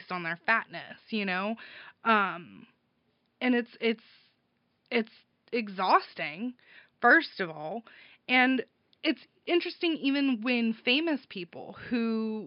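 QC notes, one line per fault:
No technical faults are heard anywhere in the clip. A faint room noise sits in the background, about 51 dB below the speech.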